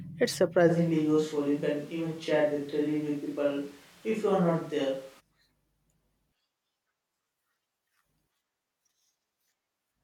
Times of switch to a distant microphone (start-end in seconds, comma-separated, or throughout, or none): 0.71-5.19